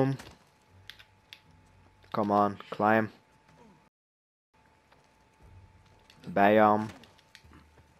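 At 3.88 s the sound drops to silence and picks up again at 4.54 s from exactly the point where it stopped. This is a rebuffering stall: playback drained its downloaded data and waited for more, inserting about 0.66 s of dead air while losing nothing.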